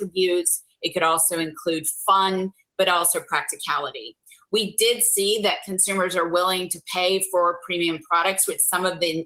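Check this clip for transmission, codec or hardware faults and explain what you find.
One fault stands out: sound cut by the noise suppressor, from 0.60 to 0.83 s. The suppressor mistook part of the sound for background noise and pulled its level down, by about 15 dB at the deepest point, for roughly 150 ms in total, so the sound briefly sinks before recovering.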